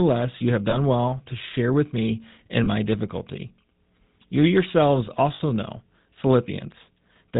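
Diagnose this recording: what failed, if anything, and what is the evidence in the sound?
The whole clip went through the GSM full-rate codec. The speech has that buzzy, gravelly roughness and nothing above 4 kHz, which fits the 13 kbps full-rate coder. The damage is plainly audible because the excitation is built from sparse, regularly spaced pulses.

Lost GSM frames show up on the network side at 0.70–0.76 s (after "you have", before "well to share with") and at 2.64–2.68 s (after "to share with me", before "my difficulty"). Each is a short metallic ring, about one 20 ms frame. At 5.34–5.41 s a longer ring points to roughly three frames lost. Each time the decoder repeated the last good frame.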